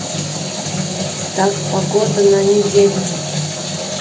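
A speech recording, with nothing technically wrong with it.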